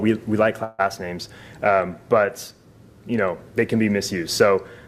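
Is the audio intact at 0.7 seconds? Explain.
No. From 0.63 to 0.81 s there is a call audio freeze: the last bit of sound is stretched into a fading buzz-like continuation for roughly 150 ms instead of moving on. The likely cause is packets arriving late so the jitter buffer ran dry and the receiver filled the gap with a continuation of what it already had. When the audio resumes, it picks up where it stopped, so nothing is lost, but everything after runs about 153 ms later.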